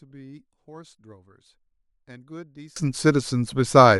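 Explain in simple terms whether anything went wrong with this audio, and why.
A sudden gain jump hits at 2.76 s: the speech and its background noise abruptly become much louder together, likely from a volume setting applied instantly rather than gradually.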